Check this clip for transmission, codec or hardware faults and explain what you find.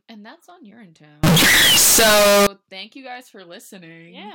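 One fault stands out. From 1.24 to 2.47 s the speech turns suddenly very loud and harsh, with a buzzy, near-square waveform and background noise as loud as the talker, though pitch stays traceable. This is likely float read as integer: 32-bit float samples interpreted as 32-bit integers.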